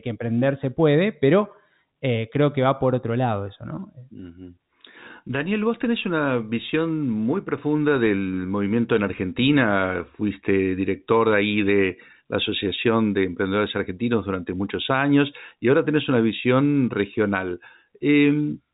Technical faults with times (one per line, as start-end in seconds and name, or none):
none